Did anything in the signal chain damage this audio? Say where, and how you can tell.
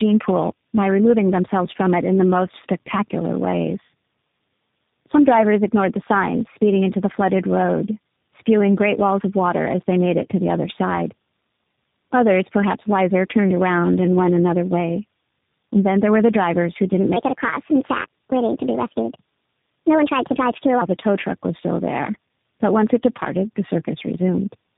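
Yes. Codec stage: tandem speech coding throughout. The audio is rough and warbly, with nothing above 3.7 kHz. This points to three speech coders in a row, each re-coding the last.

Playback stage: a section at the wrong speed, from 17.16 to 20.81 s, between "the drivers who didn't" and "the tow truck was". It runs 1.32 times fast, about five semitones high. The likely cause is a clock mismatch.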